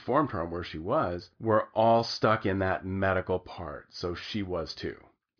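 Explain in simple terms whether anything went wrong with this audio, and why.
Nothing went wrong here: the signal stays steady and intact the whole way through, with no technical problem to point to at any moment.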